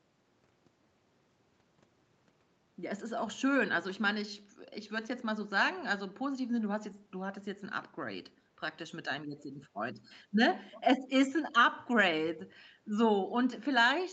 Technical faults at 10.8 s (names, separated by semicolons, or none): echo leak